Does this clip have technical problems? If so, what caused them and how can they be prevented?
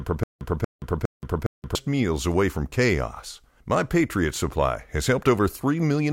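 Yes. From 0.0 to 1.75 s there is stutter with silent gaps, already under way when the speech begins. A 234 ms fragment plays three times, each followed by 176 ms of digital silence, repeating every 410 ms. The likely cause is a stalled stream replaying its last buffer at each retry, so the speech in between is lost. Deeper buffering and a steadier delivery path would prevent it.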